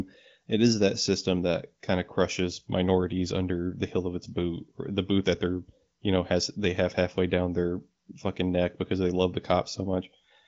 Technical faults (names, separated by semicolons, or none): none